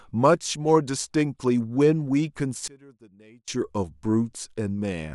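From 2.68 to 3.48 s the speech collapses by about 27 dB to a faint residue, likely one channel inverted: with reversed polarity, the centred content cancels in mono. Unlike a dropout, a faint ghost of the sound persists.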